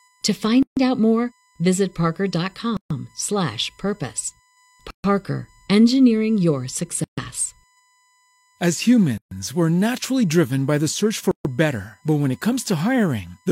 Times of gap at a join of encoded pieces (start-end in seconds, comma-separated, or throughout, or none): 0.63-0.77, 2.77-2.90, 4.90-5.04, 7.04-7.18, 9.18-9.31, 11.31-11.45